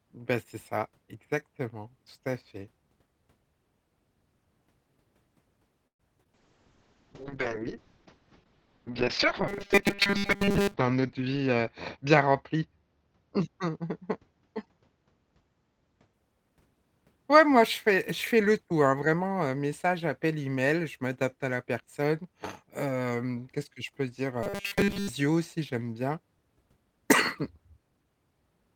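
At 5.87 to 6.01 s the speech stops for about 120 ms: a call audio freeze, likely from delayed packets draining the jitter buffer. The audio resumes where it left off with nothing lost, so unlike packet loss it inserts a gap and adds delay rather than deleting sound.

Just after, at 6.23 to 6.27 s and again at 6.27 to 6.30 s, there are two bursts of short concealed packet loss. About 20 ms of real audio is missing each time, patched by extrapolating the previous sound. This gives a quick smear or wobble, shorter than the freeze, with content actually dropped.

From 6.34 to 16.19 s a call bitrate drop takes the encoder from 32 to 6 kbps, holding the lowest rate for nearly 4 s. Bandwidth narrows from 20 kHz to 6 kHz, so the speech turns muffled and coarse.

At 9.48 to 10.74 s, and again at 24.43 to 25.09 s, there is robotic sound from repeated short buffers. A rigid 200 Hz metallic buzz sets in, which fits a 5 ms chunk being looped, likely because audio arrived too seldom and most of it was repeated. 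Its fixed drone sets it apart from the duller bitrate degradation.

At 11.03 to 12.73 s a jitter buffer speed-up plays the speech at about 107% of normal speed by trimming roughly 150 ms of pitch periods. Delivery sounds hurried, but the pitch is unchanged, unlike the robotic passages.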